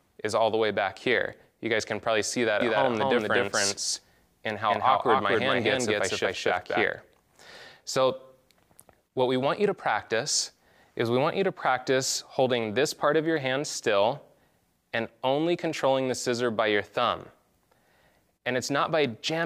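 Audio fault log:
2.61 to 6.85 s, doubled audio track: a second full-band copy trails about 200 ms behind at roughly equal level. It has no decay or room colour and starts and stops abruptly. The likely cause is a slower second capture path or an edit holding two offset copies.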